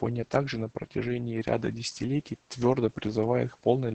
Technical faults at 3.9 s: Opus voice compression

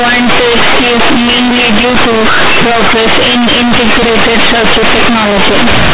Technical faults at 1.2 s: companded audio read as linear

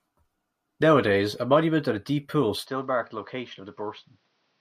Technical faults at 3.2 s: input switched to a poorer device

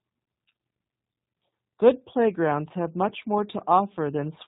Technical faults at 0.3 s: G.729 codec

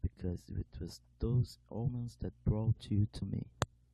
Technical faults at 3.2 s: compressed frames skipped

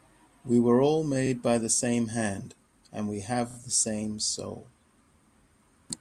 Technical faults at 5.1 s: repeated frames

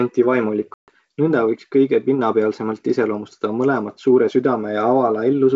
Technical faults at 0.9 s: packet loss on an ADPCM call

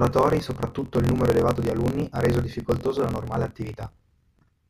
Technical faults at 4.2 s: block size mismatch (truncated)

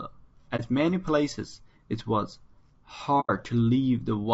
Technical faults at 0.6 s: low-delay AAC compression; AAC frame loss with muting

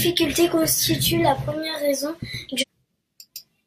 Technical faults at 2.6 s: stream segment skipped

